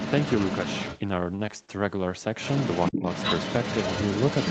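Right from the start, 0.0 to 1.0 s, there's a second voice sitting under the main talker, only a few dB quieter. That's most likely the other side's voice leaking through: the far end was playing on this talker's loudspeaker, got picked up by the mic, and the echo canceller didn't strip all of it out. It comes back from 2.38 s and runs to the end of the clip at the same sort of level, so for that whole closing stretch you're hearing two voices at once.

Between 1.35 and 1.70 s you get repeated packet loss, the robotic sound. Over that 0.35 s the stream kept losing packets, which fits four short holes, the longest about 41 ms. The receiver papered over them by stretching the last bit of sound, about 89 ms of fill in total, roughly a quarter of the span, and a further 20 ms simply dropped out. So it goes choppy and a bit mechanical, with small pieces missing.

From 2.92 to 3.06 s the main talker ducks hard, around 20 dB at the deepest, over roughly 150 ms. 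That lands inside the leak stretch, so it's likely speech suppressed in double talk: with both sides sounding together, the echo canceller couldn't tell this talker from the loudspeaker echo and turned the signal down. The leaking voice doesn't duck with it. Throughout, the call path and mic processing leave nothing above 8 kHz.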